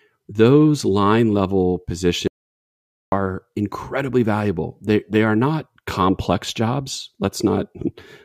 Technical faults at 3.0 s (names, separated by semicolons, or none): audio dropout to silence